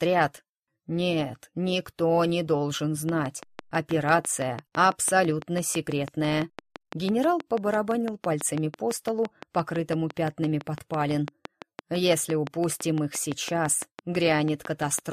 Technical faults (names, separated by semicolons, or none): train of clicks